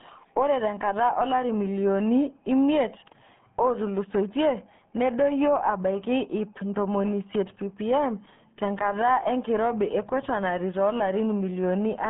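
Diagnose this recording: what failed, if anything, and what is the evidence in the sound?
RealAudio 14.4 codec damage runs through the whole clip, a failure at the codec stage. The speech is heavily muffled and gargly, band-limited to 150 Hz to 3.5 kHz with nothing above 3.8 kHz. That fits an 8 kbit/s dial-up speech coder discarding detail.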